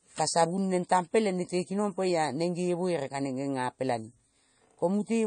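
Throughout the speech, audible MP3 compression, likely at a starved bitrate near 32 kbps, cuts everything above 9.4 kHz, leaving a flat spectrogram ceiling and flickering, watery holes.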